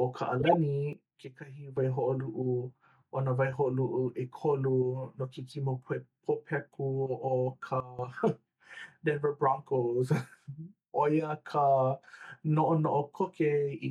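A corrupt frame decoded at 0.40 to 0.54 s: damaged bits in a short run of compressed frames were played regardless, so misread gains and codes throw energy onto wrong frequencies, heard as a brief chirpy burst of noise peaking near -10 dBFS.

A sudden gain jump follows at 0.93 s, dropping the speech and its background together by about 12 dB until 1.77 s, likely from a gain setting applied without a ramp. A second sudden gain jump at 7.80 to 7.99 s cuts the level by about 15 dB, again likely an unramped gain change.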